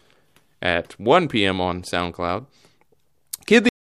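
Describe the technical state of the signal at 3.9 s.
At 3.9 s the signal is in digital silence, part of a cut-off end running from 3.69 s to the end of the file. The speech stops abruptly mid-sound at 3.69 s with no natural decay, because the final buffers were never written or played back.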